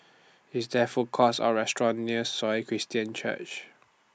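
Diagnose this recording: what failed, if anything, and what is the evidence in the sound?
Nothing in the chain audibly failed: the speech signal holds steady, with no dropouts, discontinuities or level anomalies at any point, so no stage shows evidence of a fault.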